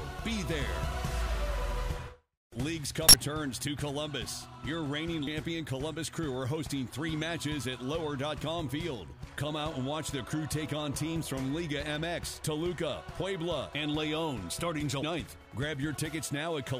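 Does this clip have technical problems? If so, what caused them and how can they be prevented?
Yes. Damaged data in a compressed stream appears from 2.77 to 3.14 s and as short blips at 5.27 s and 15.03 s. Corrupted bytes there make the decoder misread frames, lose sync and hunt for the next valid frame header. Checksum-verified transfers and error-protected streaming, with stream titles kept out of the audio data, would prevent it.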